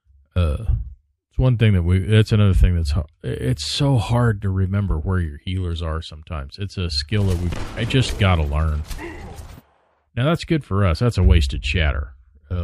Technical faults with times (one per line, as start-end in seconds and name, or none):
7.52-7.56 chunks out of order